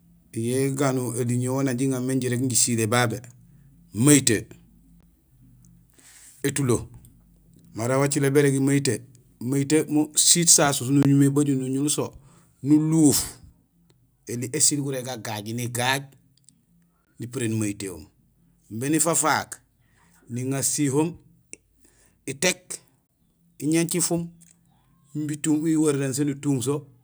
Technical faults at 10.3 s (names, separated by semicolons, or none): microphone overload